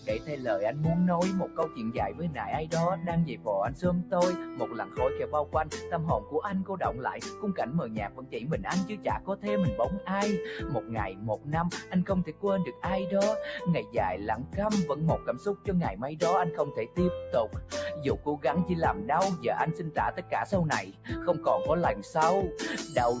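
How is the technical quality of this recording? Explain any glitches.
The recording has audible level problems caused by a speech noise suppressor. The call's microphone path also limits the audio to nothing above 8 kHz.

Throughout the clip, a noise suppressor applied to music or sounds treats sustained, steady material as background noise. It pulls those parts down while transients pass, so the level swings by around 10 dB. The result is pumping and fluttering, with held sounds and tails thinning.

At 0.0–0.45 s, 1.47–9.45 s, 10.83–12.83 s, 13.83–15.68 s, 20.16–21.11 s and 22.03–22.96 s, there is sound cut by the noise suppressor. Sustained or decaying parts drop by about 6 to 9 dB, with tails shortened. The 1.47–9.45 s stretch is worst, with roughly two seconds affected in total.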